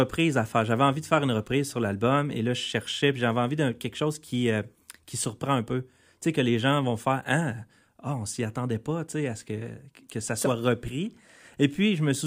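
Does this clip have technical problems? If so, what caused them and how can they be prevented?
No, nothing in this speech recording points to a technical fault, so there is nothing here to trace to a cause or guard against.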